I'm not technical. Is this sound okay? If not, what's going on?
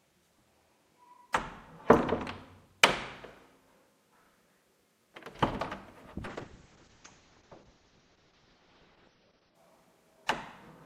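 No. From 6.31 s to about 9.61 s there is a call bitrate drop. The connection's estimate of available bandwidth fell sharply, so the encoder was told to describe the sound with far less data. For about three seconds it codes the audio very coarsely and discards the high frequencies above roughly 6 kHz, so the sound turns dull, muffled and rough. At 9.61 s the data rate recovers and the full, brighter sound returns.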